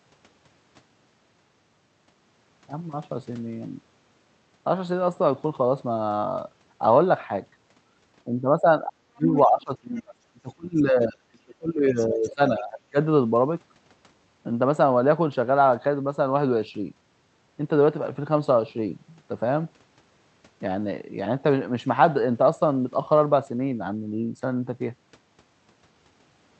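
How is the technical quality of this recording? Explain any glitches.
The recording has two clear faults, both in the middle section, over a call path whose high end stops near 8 kHz.

Speech suppressed in double talk, 8.25–10.15 s and 10.32–12.97 s: the speech dips by as much as about 35 dB and about 30 dB. This is likely echo suppression clamping down during simultaneous talk. On the waveform the envelope collapses, and the spectrogram shows gaps.

Other side's voice leaking through, 9.34–9.41, 9.97–10.02, 11.96–12.07 and 12.24–12.30 s: short scraps of another voice appear at about −10, −35, −25 and −25 dB relative to the speech. This is likely residual loudspeaker echo that the canceller did not remove, and it shows as short spectrogram blips.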